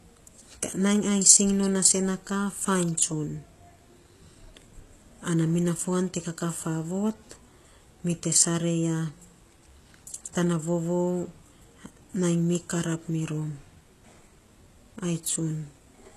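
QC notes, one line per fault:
Throughout, HE-AAC compression: the sibilants have a gritty, lispy edge and the top end sounds synthetic, with nothing at all above about 12.3 kHz. The likely cause is HE-AAC, where only the lower spectrum is properly coded and the treble is rebuilt by copying lower bands upward under a rough envelope, so the upper harmonics don't line up with the real ones. The damage is plainly audible, which fits a bitrate around 16 kbps.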